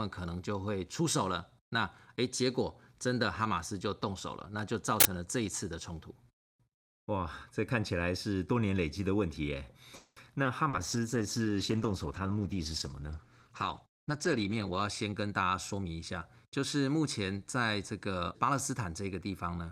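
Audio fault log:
5.00–5.05 s, uninitialised buffer: a sudden, loud burst of harsh digital noise lasting about 46 ms cuts across the speech. It comes from a block of playback memory being sent to the output before any real audio was written into it, so whatever stale values sat there were played as samples. The length of the burst fits a 2048-sample block, and the randomness of leftover data explains its raw, noisy character.
9.95–10.19 s, call audio freeze: the speech stalls and the last sound is stretched into a buzzy continuation for about 210 ms, with no drop to silence, before the talk resumes exactly where it stopped. This is likely packets held up in transit so the receiver's jitter buffer ran dry; it kept extending the final sound to cover the wait. Because nothing was lost, the result is an inserted pause that pushes everything after it about 210 ms later.
10.44 s and 10.69–10.76 s, short concealed packet loss: two brief smeared moments, the first a quick blur of about 10 ms, the second a longer wobble of about 40 ms, each where roughly 40 ms of the call failed to reach the decoder in time. 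The receiver papered over each hole by carrying the preceding sound forward and blending back into real audio. At the first one the gap closes up, pulling the timing back by around 30 ms.
10.78–14.90 s, call bitrate drop: for about 4 seconds the speech turns rough and watery, and loses its top end, sounding duller. The call's bandwidth estimate fell and the encoder was cut from 64 kbps to 14 kbps, so it quantised everything more coarsely and narrowed the coded audio band from 20 kHz to 12 kHz, removing the highest frequencies until the rate came back.
10.96–11.39 s, jitter buffer slow-down: the speech drags slightly, running at about 92% speed with stretched-out sounds, while the pitch stays where it was. Having run low or raised its target delay, the receiver rebuilt its reserve by repeating single pitch periods over and over, adding about 44 ms of audio across this stretch. The repeated cycles are what give the drawn-out quality.
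13.82–15.86 s, jitter buffer speed-up: the speech becomes hurried, running at about 111% speed without any rise in pitch, for roughly two seconds. The jitter buffer was holding more audio than it wanted, so the receiver trimmed away short slices of one or a few pitch periods many times in a row, shedding around 200 ms of delay in total. Removing whole cycles keeps the pitch intact while compressing the timing.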